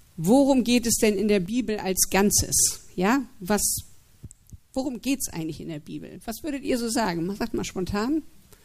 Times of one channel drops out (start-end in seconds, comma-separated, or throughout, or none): 1.46-1.98, 4.25-6.65